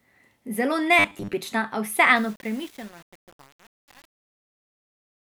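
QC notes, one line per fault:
0.99–1.33 s, robotic sound from repeated short buffers: the speech collapses into a stiff, metallic buzz at 100 Hz that only loosely tracks the talking. Most of that stretch is the same tiny slice looping, which fits a 10 ms buffer being replayed, likely because fresh audio arrived too slowly.
2.16–5.40 s, truncation distortion on a fade: the fade-out that starts around 2 s goes gritty as it gets quiet. The fade stage is working at only 7 bits with no dither, so the low end of the waveform breaks into coarse square steps.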